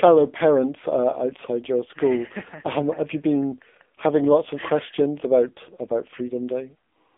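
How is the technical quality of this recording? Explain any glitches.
The technical quality is poor. The speech runs through an AMR narrowband mobile codec for the whole clip. Its 8 kHz telephone path discards everything above about 3.7 kHz, leaving a band of roughly 250 Hz to 3.6 kHz. The vocal-tract model, excited by sparse pulses, is heavily strained, which fits a low mode near 6.7 kbps. The result is buzzy, synthetic and muffled. A spectrogram shows a hard ceiling near 3.7 kHz with nothing above it and a thin floor below 250 Hz.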